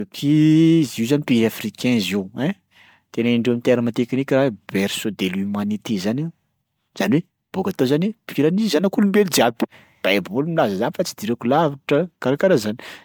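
Throughout, the speech sounds swirly and hollow, with smeared onsets. This is generation loss, likely from about seven MP3 re-encodes near 135 kbit/s. The spectrogram shows flickering holes and nothing above 20 kHz.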